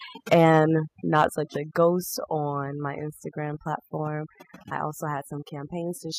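Overdone noise removal runs through the whole speech clip. The suppressor pushes individual frequency bands down or out whenever they sit close to its noise estimate, so the background breaks into twinkling, warbling specks and the quieter parts of the voice thin out with it. Because this is band-by-band gating, it differs from a plain low-level hiss or a broadband gate. The residue flickers in pitch and texture rather than simply dropping in level.

From 0.32 to 0.58 s the loudest moments take on a crackling, squared-off edge. This is likely microphone overload: the input drove peaks about 4 dB past the converter's limit, shaving their tops off across a small share of the samples. Unlike codec distortion, the grit follows the peaks and vanishes on softer syllables. At 0.34 s, inside that stretch, voice and background together fall by about 3 dB in one step, pointing to the likely microphone volume stepped down as the software reacted to the overload.

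A second overload, about 2 dB over, roughens the peaks from 1.18 to 1.25 s, again with the clipping likely occurring at the converter. At 1.35 s, just before "a ghost", the level drops by about 6 dB at once, likely another automatic volume step down. The whole scene shifts down together and stays there, which separates these steps from a compressor's pumping or a fade.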